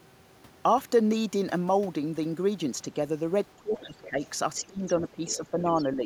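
Speech suppressed in double talk, from 3.56 to 4.21 s: the talker's speech sinks by as much as about 20 dB. Both sides were likely talking at once, and the echo canceller, unable to tell the near talker from the loudspeaker echo, pulled the whole signal down. The other side's voice leaking through, from 3.8 to 4.93 s: a second, fainter voice, about 20 dB below the talker, rides underneath. The canceller likely left part of the loudspeaker playback in the microphone signal. Speech is suppressed in double talk again from 4.67 s to the end of the clip, dipping by up to about 15 dB in patches as the canceller likely clamps down during overlap. Within that stretch, brief scraps of the other side's voice leak through at 5.28 to 5.36 s and 5.77 to 5.85 s, each short and again about 20 dB down, likely residual echo slipping past the canceller.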